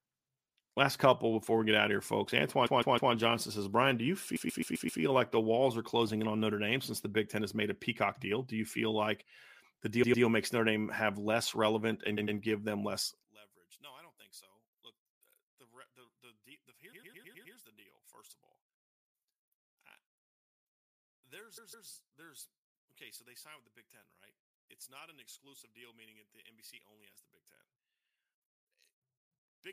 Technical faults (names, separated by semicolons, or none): repeated frames; one channel inverted